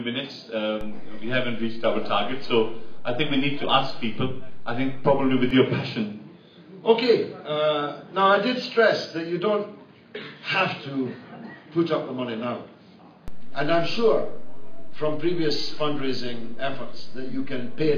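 A low thump at 0.81 s, a second at 5.51 s, and another at 13.28 s, with the sound running on unchanged beneath them, mark a DC step. The waveform's zero line jumps by about -26 dBFS at 0.81 s and returns at 5.51 s, then shifts by about -24 dBFS at 13.28 s and stays offset through the end. Each abrupt jump in the baseline is what produces the thump.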